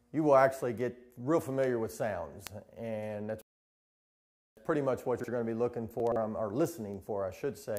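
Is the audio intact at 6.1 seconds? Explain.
No. From 6.00 to 6.16 s the sound turns briefly garbled and jumbled. This is chunks out of order: a 40 ms chunk arrived late and plays three chunks after its proper place. Nothing is lost, but the sequence is scrambled.

Across most of the clip there are also sharp, unevenly strong ticks at a steady rate of about one every 0.7 s, from 0.81 to 7.77 s. These are word clock ticks. The receiving clock isn't locked to the sender and drifts by roughly 30 ppm, so a single sample is dropped or repeated at each slip.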